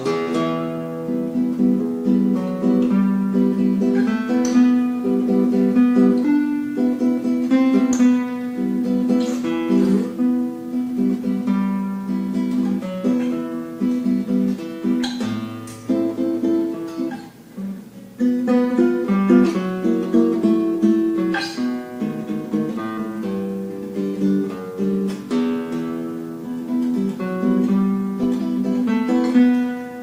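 At 22.97 to 23.00 s and again at 28.23 s, compressed frames are skipped: roughly 150 ms, then about 40 ms of 20 ms frames never play. Each time the audio jumps ahead, seen as a discontinuity in the waveform and a narrow vertical smudge on the spectrogram.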